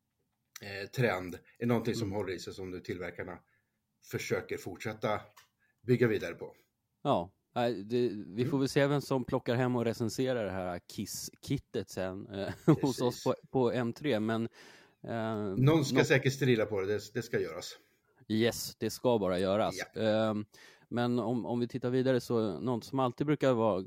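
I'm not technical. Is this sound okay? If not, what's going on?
No. There is an electrical switching spike at about 19.39 s, right after the words "det ska bara". It is a sharp snap lasting a split second, fairly faint, sitting on top of the speech. The likely cause is a nearby switch, motor or spark of static electricity creating a tiny burst of electrical noise that the audio cable or equipment picked up and added to the recording.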